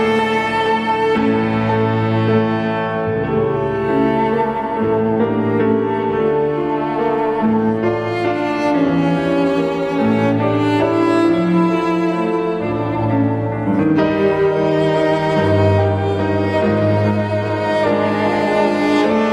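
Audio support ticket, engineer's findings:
No audible faults found in the signal path on review; level, continuity and timing are consistent throughout, with no dropouts, discontinuities or transport-related disturbances to report.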